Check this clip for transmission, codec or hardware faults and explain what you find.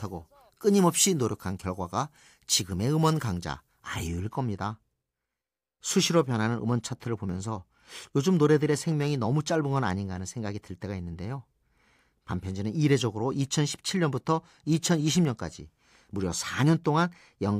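One fault is present. From 0.0 to 4.07 s, pre-emphasis is left on. An uncorrected treble boost lifts 10 kHz about 11 dB, consistent with a 50 µs FM curve. The speech sounds thin and sibilant.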